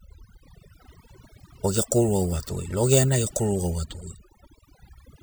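Overdone noise removal runs through the whole clip, from start to finish. A noise reduction stage was driven too hard on a noisy speech recording, so it cuts individual frequency bands deep or removes them entirely wherever their level sits close to its noise estimate. Softer parts of the speech fall below that threshold and are stripped away too. Between phrases the background collapses into near silence dotted with twinkling specks.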